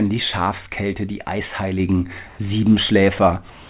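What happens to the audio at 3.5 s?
From 3.5 s to the end at 3.7 s, the background becomes steady, featureless hiss, about 1 dB quieter: comfort noise in place of the background, likely from discontinuous transmission. The spectrogram shows a smooth, uniform band below 4 kHz.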